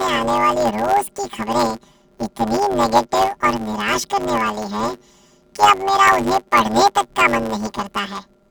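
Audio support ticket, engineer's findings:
Symptom: robotic buzz across the whole speech clip, steady, no clear octave shift. Time: throughout. Probable component: channel layout handling between decoder and playback. Mechanism: planar audio read as interleaved; 10 ms blocks each replayed as left half then right half at double speed, producing a 100 Hz block-rate buzz.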